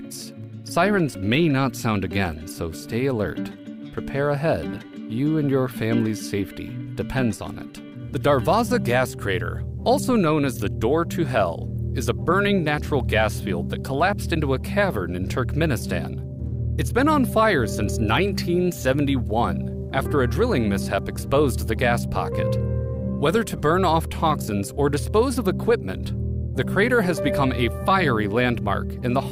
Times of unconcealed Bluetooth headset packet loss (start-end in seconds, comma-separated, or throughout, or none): none